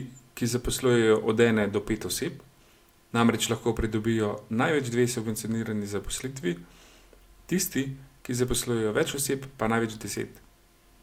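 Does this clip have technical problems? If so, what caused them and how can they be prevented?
No, nothing in this speech clip points to a technical problem, so there's no cause to track down and nothing that needs preventing.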